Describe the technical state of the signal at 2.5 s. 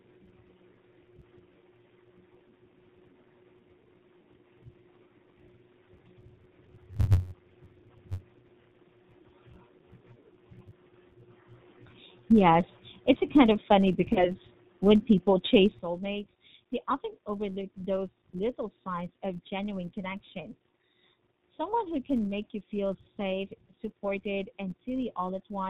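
At 2.5 s the speech carries G.729 codec damage, present across the whole clip. The sound points to the 8 kbit/s G.729A coder, which rebuilds speech from a vocal-tract model and a few pulses per frame, leaving nothing above 4 kHz and a plainly rough, synthetic quality.

A filter restarted on every block is also audible there, as it is throughout. Each block begins from a cleared filter state, adding a small transient that forms a buzz near 93.8 Hz, which fits a 512-sample block. The buzz rises and falls with the speech level.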